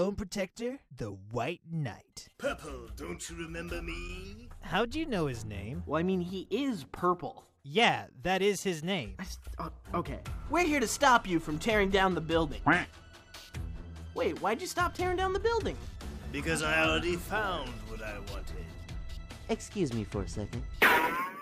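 Weak DAB reception let bit errors of roughly 0.1 to 0.15 percent slip past error correction into the MP2 data, causing DAB burbling: brief blips of noise at 2.86–2.95, 7.13–7.20, 9.45–9.47, 17.21 and 19.91 s.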